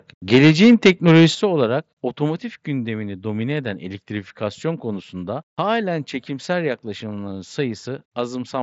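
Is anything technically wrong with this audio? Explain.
Yes. The speech has three problems: clipping at the start, sudden drops in level, and a DC step later on.

From 0.33 to 1.25 s there is microphone overload. The input level was pushed roughly 8 dB past full scale, so the converter flattens the tops of the loudest peaks, clipping around 7 percent of the samples in that stretch. The cause is likely an input volume set too high. It sounds like a harsh, crackly edge on the loudest syllables.

The microphone volume steps down three times: about 3 dB at 0.36 s, about 9 dB at 1.35 s, and about 3 dB at 2.37 s, just before "gündemini domine eden". The likely cause is call software reacting to the clipping by lowering the device's input gain in discrete jumps. Speech and background noise fall together each time, so the level sags abruptly rather than fading, and the 9 dB drop is the most obvious.

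At 4.40 s a DC step shifts the waveform's zero line, and the offset holds until the end of the clip. A sudden baseline jump like this comes from something such as a converter recalibrating or an offset input being switched in. It is heard as a single low thump at that moment, while the sound itself continues unchanged. The Bluetooth mSBC headset codec caps the band at about 7.7 kHz.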